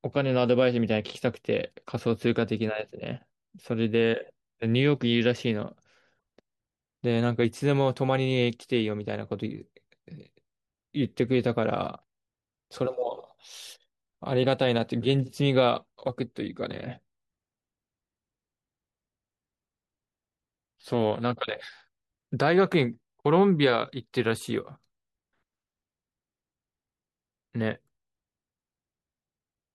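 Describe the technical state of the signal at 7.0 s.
At 7.0 s the speech signal is intact, with no audible fault at that point.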